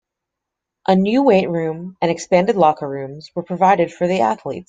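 Nothing technical stands out in this short bit of speech; it comes across with no faults to point to at any moment.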